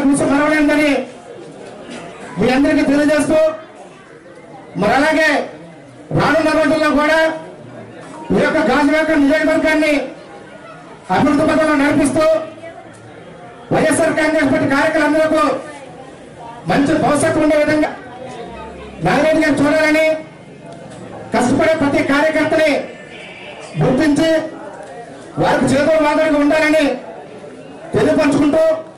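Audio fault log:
17.84 and 21.11 s, compressed frames skipped: the decoder plays straight past chunks of audio, so the sound jumps forward instead of continuing. The first jump loses something like a fifth of a second, and the second loses about a tenth. Each gap is a whole number of roughly 23.2 ms frames.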